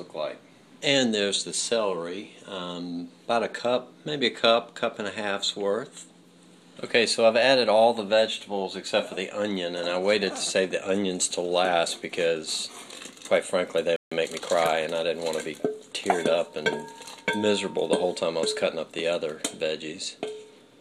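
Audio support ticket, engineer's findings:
Playback stall, 13.96 to 14.12 s: output drops to silence for about 150 ms mid-flow, then resumes. Likely cause: player buffer underrun or blocked audio thread, leaving the output starved until data arrived again.

Time-compressed catch-up, 14.12 to 14.72 s: audio runs hurried at 1.25x with pitch unchanged. Player trimming the backlog from the stall by cutting small segments and cross-fading across the joins.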